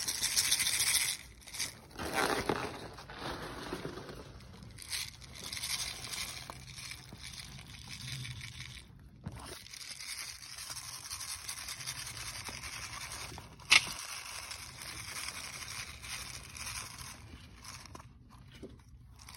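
No dropouts, glitches, clipping or other transport or processing faults turn up anywhere in the recording.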